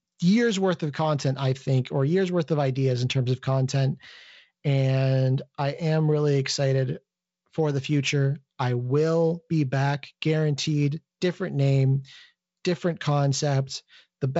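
No technical faults can be heard in the speech. The G.722 wideband telephone coding path comes through as audio that stops at about 7.7 kHz with a light layer of coding noise, which fits the 48 kbit/s mode.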